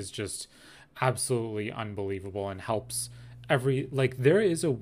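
From 2.69 s, right after "just absolutely unbelievable and", mains hum enters and holds to the end: a steady 60 Hz tone roughly 20 dB under the speech from power-line coupling, its fixed pitch distinguishing it from broadband, fluctuating rumble.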